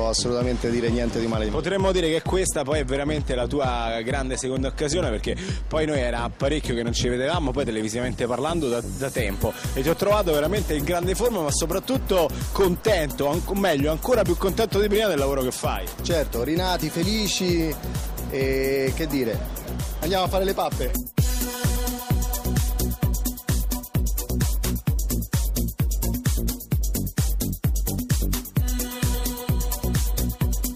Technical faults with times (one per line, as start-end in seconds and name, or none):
none